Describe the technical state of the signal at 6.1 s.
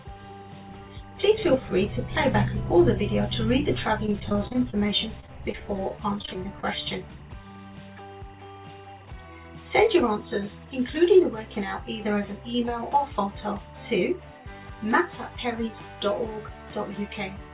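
At 6.1 s the signal sits inside a burst of repeated packet loss (robotic sound) running from 4.06 to 6.65 s. Short holes, none longer than 30 ms, keep recurring, each patched by extending the previous sound, so about 13% of the stretch is concealed. The result is choppy, with pieces missing. A spectrogram shows smeared, repeated vertical slices; the waveform shows stuttering, copied fragments.

Timecode bleed also sits underneath, as it does throughout. A square-wave code at a 23.976 fps rate leaks in, flipping between roughly 1 kHz and 2 kHz, around 30 dB below the sound. It is heard as a steady chirping warble. On a spectrogram it appears as two persistent lines with harmonics, all within the call path's 4 kHz ceiling.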